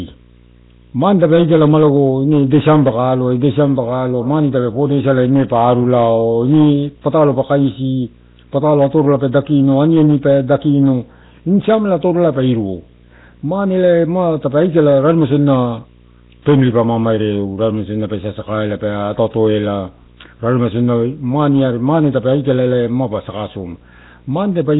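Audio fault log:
throughout, video or display buzz: A screen or video cable is coupling into the audio path, putting a steady buzz at the 60 Hz field rate with hash above it under the speech, roughly 30 dB below the speech level and present from start to finish.
throughout, Nellymoser compression: The speech has a rough, hissy halo and a smeared, underwater quality, with nothing above 3.9 kHz. This is likely heavy Nellymoser Asao coding at a rate that fits 16 kbps, where weak bands get no bits and are filled with noise.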